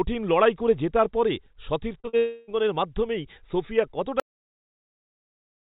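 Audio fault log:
2.00–2.15 s, short concealed packet loss: three back-to-back gaps of roughly 40, 20 and 40 ms are patched by extending the preceding sound. Each is a brief smear or wobble rather than a fading tail.
2.17–2.49 s, long network dropout: about 0.3 s of audio never arrives and is replaced by the last sound continuing as a buzz or hiss that decays. This is likely a dropout, not packet loss, because the patch lasts far longer than a few hundredths of a second.
4.20 s onward, cut-off end: the sound stops mid-sound and falls straight to digital silence with no decay, because the final buffers were never played. This is unlike a natural fade or a concealed gap.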